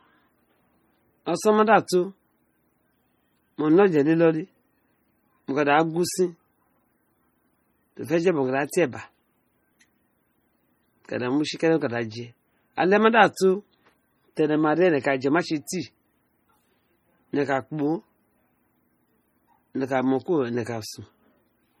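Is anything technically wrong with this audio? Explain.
Yes. Heavy MP3 compression, likely, runs through the whole speech clip. Starved encoders zero weak frequency lines that then flicker between frames, giving a watery, swirly texture and smeared attacks. The damage fits roughly 32 kbps, and nothing sounds above 21 kHz.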